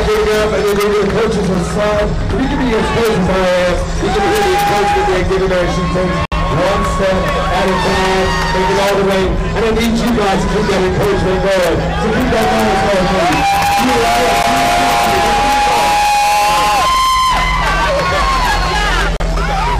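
At 1.54 s the sound drops out for about 7 ms, then again from 6.25 to 6.32 s for 64 ms, at 14.43 s for 13 ms, and from 19.17 to 19.20 s for 36 ms. Each is a hard cut to silence before the audio carries on. It's likely a Bluetooth stall: packets got held up by interference, the headphone buffer ran empty, and playback paused until the retransmitted packets arrived.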